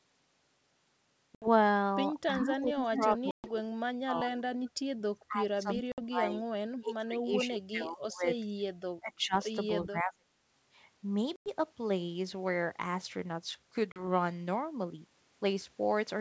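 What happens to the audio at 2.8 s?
Two things overlap there. From 2.38 to 3.18 s there's an echo leak: a copy of the speech comes back about 0.39 s late, only about 5 dB under the original, most likely from a loudspeaker on the far end whose echo canceller let it through.

At the same time, from 2.39 to 4.51 s, there's speech suppressed in double talk. The talker's level drops in chunks, as deep as roughly 30 dB, over about a second and a half in total. That's likely the canceller ducking both voices because it couldn't tell them apart.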